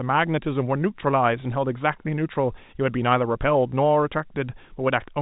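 Speech carried over a G.711 telephone path, consistent with 64 kbps mu-law coding, with no technical fault to report: its band stops at about 3.8 kHz, and the faint level-following quantisation noise of that format is all the coding leaves behind.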